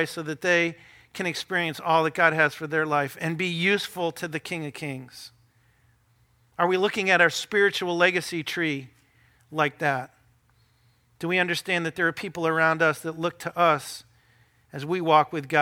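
No technical faults occur at any point in the speech, so there are none to describe in time order.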